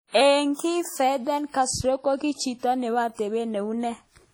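Throughout the speech, heavy WMA compression is the likely cause of ringing, washy smearing and breathing hiss, consistent with about 32 kbps; the spectrogram shows blotchy holes where weak components vanish.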